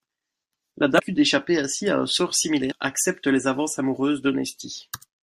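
From 0.98 to 1.00 s, just before "d'échapper ainsi à un", damaged data in the compressed stream garbles a decoded frame into a brief glitch.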